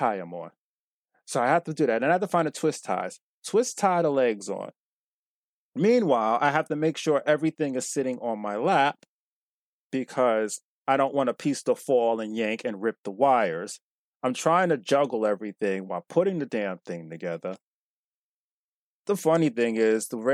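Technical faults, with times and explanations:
No technical faults, with times or otherwise, can be heard in this speech.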